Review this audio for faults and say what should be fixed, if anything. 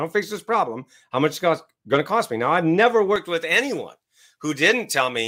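Pre-emphasis left on: from 3.16 s, right after "I've never", to the end of the clip, the treble boost applied for transmission was never undone by the matching de-emphasis stage. The high end sits about 11 dB above 1 kHz at 10 kHz, a tilt that fits the J.17 curve, so the speech turns thin, bright and hissy on sibilants. Apply the corresponding de-emphasis filter at the receiving end whenever pre-emphasis is used on the link.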